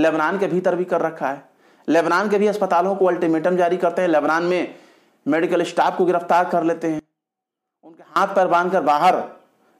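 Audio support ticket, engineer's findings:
6.99–8.16 s: level falls about 25 dB but does not go silent, unlike a dropout. Likely one channel inverted, so shared content cancels when summed to mono.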